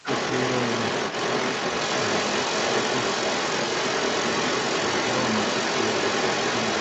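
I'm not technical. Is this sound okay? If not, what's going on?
No. From the start to the end at about 6.8 s, a second voice runs under the main talker, roughly as loud or slightly louder. This is other side's voice leaking through, likely the far end's loudspeaker audio that the echo canceller failed to remove.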